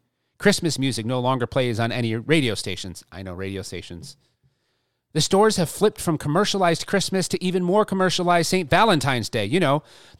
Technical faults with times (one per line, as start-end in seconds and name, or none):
none